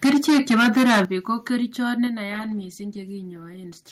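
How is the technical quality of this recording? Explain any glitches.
The recording has three problems: heavy distortion at the start, several sudden drops in level, and a marked loss of clarity in the final stretch.

Microphone overload, 0.04 to 1.03 s, ending just before "ko kerichot": the speech peaks sit about 13 dB above what the converter can represent, so nearly a third of the samples are flattened. This is likely from the microphone input volume being set too high. It sounds harsh and crackly on the loudest syllables. A waveform view shows squared-off, flat-topped peaks. A spectrogram shows bright vertical smears of added upper harmonics.

Microphone volume stepped down, at 0.05 s (about 2 dB), 1.05 s (about 10 dB, right before "ko kerichot") and 2.07 s (about 5 dB, right after "ko kerichot"): speech and background both fall in level at once, with no fade. The cause is likely the call software reacting to the overload by lowering the device's input gain in single jumps. 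On a waveform, the envelope drops abruptly to a lower band. The 1.05 s step is the largest one.

Call bitrate drop, 2.27 s to the end: the encoder goes from 64 to 20 kbps and stays near that low rate for about 1.65 s. With fewer bits, the codec quantises the speech coarsely and discards high frequencies. The result sounds muffled and watery. A spectrogram shows the upper bands cut off sharply at a lower ceiling, with blotchy, smeared detail below it.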